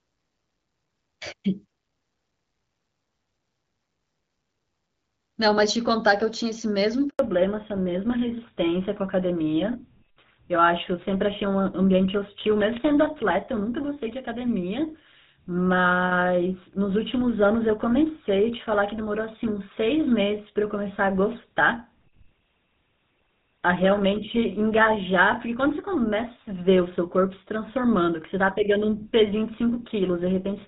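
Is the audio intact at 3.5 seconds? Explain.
Yes, at 3.5 seconds the speech is intact, with no dropout, click or other fault to be heard, only the clear wideband sound of the AMR wideband (HD Voice) codec at a rate that suggests around 12.65 kbit/s.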